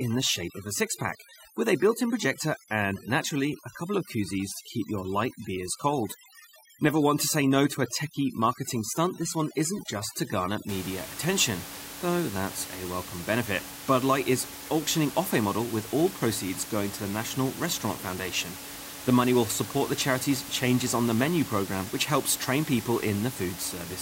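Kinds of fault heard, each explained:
Overdone noise removal: bands near the estimated noise are cut, so until 10.69 s there are twinkling specks where the background should be; the spectrogram shows isolated patches.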